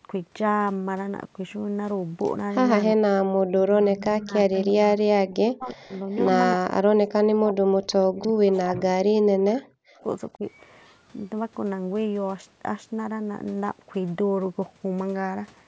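Speech, with the voice ducking hard, by up to about 40 dB, at 2.93–3.42, 3.96–4.54, 5.04–5.93 and 6.56–10.42 s, most likely speech suppressed in double talk as the canceller fights the far side. There's also faint echo leak, a copy delayed by 347 ms at roughly 25 to 35 dB down, at 4.54–4.64, 5.69–5.74, 6.12–6.23 and 8.21–8.57 s, likely loudspeaker pickup the canceller missed.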